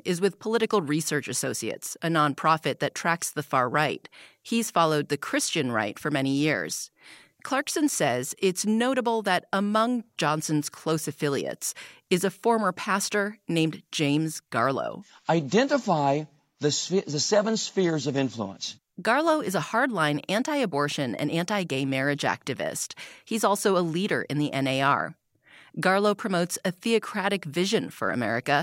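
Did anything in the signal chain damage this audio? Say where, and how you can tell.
No, nothing along the chain has left an audible mark on this speech recording, and the signal reaches the listener intact at every stage.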